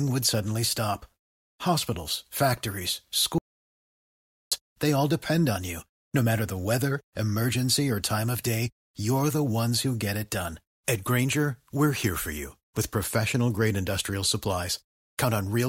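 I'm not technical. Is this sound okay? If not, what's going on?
No. At 3.38 seconds the speech cuts out completely and only returns at 4.52 seconds. That is an audio dropout to silence. About 1.1 seconds of sound is simply missing. The likely cause is the input briefly disconnecting or muting while recording continued.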